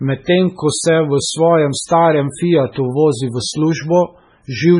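Throughout the speech, a starved lossy encoder, likely MP3 compression at a very low bitrate around 16 kbps, is cutting everything above 10.5 kHz and dropping weak frequency lines frame by frame, leaving a dull, watery, swirling sound with smeared consonant attacks.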